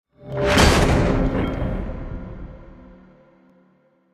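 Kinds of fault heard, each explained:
Dropped samples: three isolated sharp clicks at 0.32, 1.48 and 3.50 s, each likely from about 0.7 ms of audio going missing, so the waveform jumps abruptly to a later value. Each shows as a thin vertical line across the spectrogram.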